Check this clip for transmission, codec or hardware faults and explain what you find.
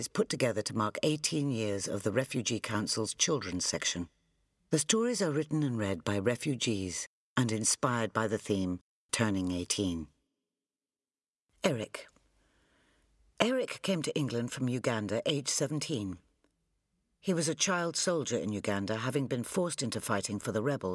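No transmission, codec or hardware faults turn up in this clip.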